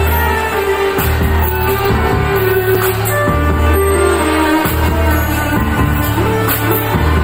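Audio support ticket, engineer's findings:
Block of digital silence at 2.75 s. Audible as a tick or dip. Gap about 5.3 ms, audio cut out completely. No fade in or out. Length fits a 256-sample buffer at 48 kHz. Probable component: audio output callback. Mechanism: buffer not filled before its deadline, zeros sent in its place. Check render thread timing.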